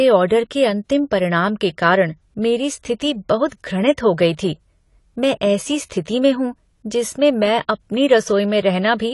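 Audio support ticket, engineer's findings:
Dull, smeared speech start to finish, with warbly, fizzy sibilants. Nothing above 11.5 kHz. Likely AAC compression squeezed hard, consistent with about 32 kbps AAC-LC: the encoder drops the top band and coarsely quantises what's left, hence the holes and swirl.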